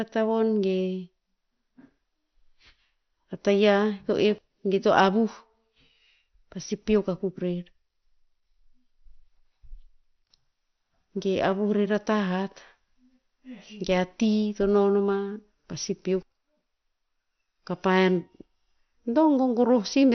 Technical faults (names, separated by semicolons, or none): MP2 compression